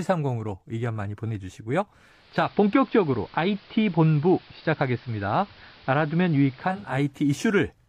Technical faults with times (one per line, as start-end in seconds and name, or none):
2.00-7.06 digital radio blending to analogue